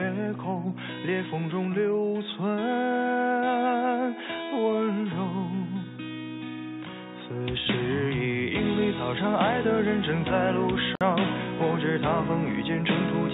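At 10.95 s a gap at a join of encoded pieces opens for 55 ms. Unlike a dropout, the sound resumes exactly where it stopped, with edges smeared by the codec.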